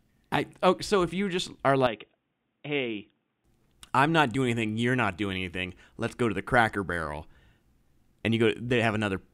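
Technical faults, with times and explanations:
1.87–3.44 s, input likely switched to a poorer device: a narrower path cuts everything above 3.8 kHz, so speech turns dull, drops about 5 dB, and carries faint new noise.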